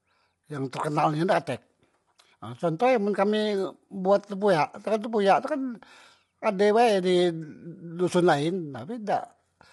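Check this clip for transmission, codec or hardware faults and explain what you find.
One fault runs through the whole speech clip: lossy compression, with nothing above 11.6 kHz.

Low-delay AAC compression, from start to end: the speech is plainly rough and grainy, and the top band stops sharply at 11.6 kHz. The likely cause is AAC-ELD, the low-delay AAC used in video calls. Its short frames of about 10 ms separate pitch harmonics poorly and spend more bits per second. At a rate the damage suggests is around 32 kbps, the encoder smears detail into grain and discards the highest frequencies.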